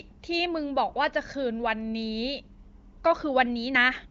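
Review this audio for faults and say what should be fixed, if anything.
Nothing to fix: the speech rides an AMR wideband (HD Voice) path at 23.05 kbit/s, with the band ending around 7.4 kHz as that codec dictates, and no fault turns up anywhere in the clip.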